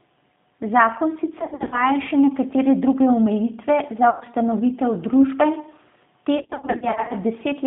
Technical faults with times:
0.00-7.66 G.729 codec
1.40-1.84 VoIP packet loss concealed by the speech codec
4.10-4.25 VoIP packet loss concealed by the speech codec
6.38-7.14 VoIP packet loss concealed by the speech codec

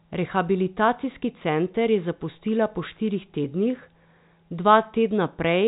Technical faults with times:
none

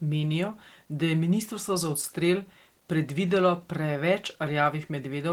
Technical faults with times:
0.00-5.32 Opus voice compression

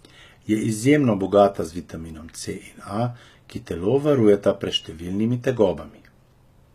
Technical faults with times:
0.00-6.75 HE-AAC compression

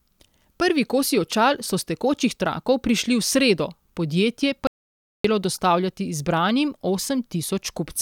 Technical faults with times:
4.67-5.24 audio dropout to silence

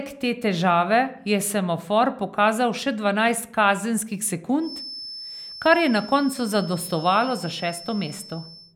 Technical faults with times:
4.57-8.76 feedback whistle

